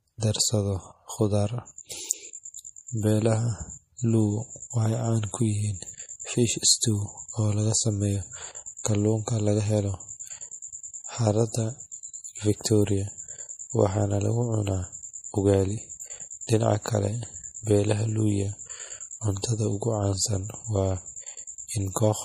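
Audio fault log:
throughout  MP3 compression: The audio carries plainly audible codec damage, with nothing above 15.2 kHz and a watery, swirling texture where weak spectral detail drops in and out between frames. Sibilants turn metallic and chirpy, and onsets lose their edge. The sound points to a low-rate lossy encode, likely MP3 at a bitrate around 40 kbps, where the encoder runs short of bits, cuts the treble at a fixed point and discards quieter frequency lines.
8.84 s  pre-echo: A brief hiss arrives just ahead of a sharp onset, spread over about 15 ms, and the attack itself sounds softened rather than crisp. The codec works in fixed blocks and distributes its quantisation noise across the whole block. Because this transient lands late in its block, noise scaled to the loud attack also fills the near-silent moment before it, so the hiss is heard first.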